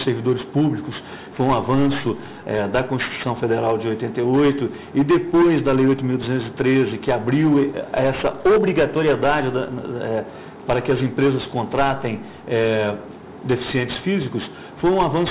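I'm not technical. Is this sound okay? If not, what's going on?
No. Aliasing runs through the whole clip. The audio was apparently squeezed down to a much lower sample rate, around 8 kHz, without first removing the highest sounds. Anything above 4 kHz folds back as wrong, unrelated tones, giving a gritty, metallic edge.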